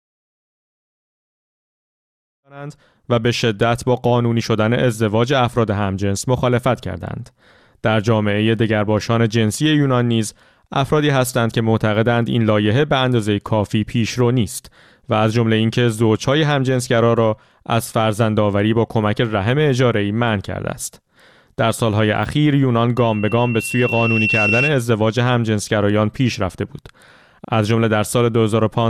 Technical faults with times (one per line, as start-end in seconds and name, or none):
22.97-24.75 loudspeaker feedback squeal